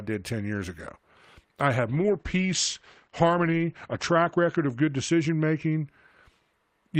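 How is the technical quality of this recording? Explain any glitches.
The recording has one clear fault, a call bitrate drop. From 1.89 s to 5.93 s, just after "I have", the encoder gets starved of bits, which fits a fall from about 32 kbps to about 11 kbps. The audio bandwidth collapses from 20 kHz to 8 kHz, so the speech turns muffled and rough, worst for about 2.2 s before recovering.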